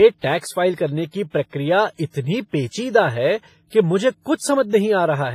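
Speech clip with heavy WMA compression damage running the whole way through: it sounds ringing and washy, with a hiss that swells and fades with the voice, and nothing above 15.4 kHz. That's likely a low-bitrate WMA encode, something around 24 kbps.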